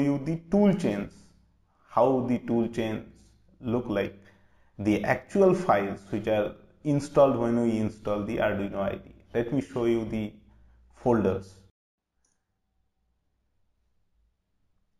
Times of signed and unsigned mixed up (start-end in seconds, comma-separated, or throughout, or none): none